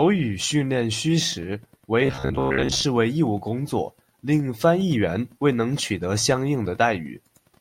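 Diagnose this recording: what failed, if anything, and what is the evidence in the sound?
From 2.06 to 2.84 s, just before "为义务工", the speech collapses into a rigid metallic buzz at about 66.8 Hz: robotic sound from repeated short buffers. The likely cause is a starved driver or buffer replaying its last ~15 ms chunk for most of that stretch.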